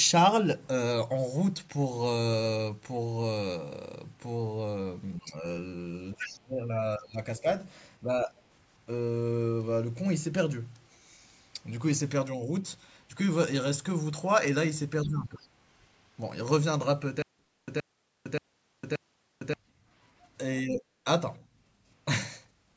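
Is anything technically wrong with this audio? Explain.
Yes, three kinds of fault can be heard in this speech clip.

Speech suppressed in double talk occurs at 5.17–5.44 s, 6.15–6.65 s, 6.98–7.45 s, 8.04–8.32 s, 15.05–15.4 s and 20.69–21.05 s. In each window the talker's level sags or breaks into pieces, from a slight dip to a drop of roughly 25 dB at its worst, around 6.2–6.6 s. The likely cause is an echo canceller that heard both ends talking at once, failed to tell the local voice from loudspeaker echo, and pulled down everything.

The other side's voice leaking through appears at 6.22–6.37 s as a second voice about 10 dB below the main talker. At 8.38–8.42 s it returns as a very faint scrap, about 35 dB down. This is likely far-end audio played from the talker's loudspeaker back into the microphone, with the echo canceller leaving a residue instead of removing it completely.

The stutter with silent gaps runs from 17.22 to 19.54 s. 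A 122 ms burst of sound repeats four times, each followed by about 456 ms of dead digital silence, giving a steady cycle of roughly 578 ms. Whatever should have played in that stretch is gone. The likely cause is a stalled stream that replayed its last buffered fragment at each retry and then ran empty before the next one.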